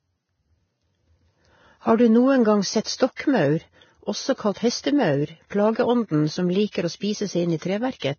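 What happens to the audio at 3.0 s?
A short hiss creeps in just after "gang sett", from 2.96 to 3.0 s, smearing the attack: pre-echo, where block-spread quantisation noise leaks about 38 ms ahead of the onset. Beneath it, the sound is grainy and dull with nothing above 6.6 kHz, likely from heavy Vorbis compression around 18 kbps coarsely quantising the treble.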